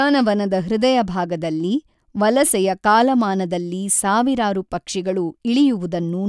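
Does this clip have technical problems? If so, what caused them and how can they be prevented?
No, the speech signal shows no technical faults that need a cause traced or a fix applied.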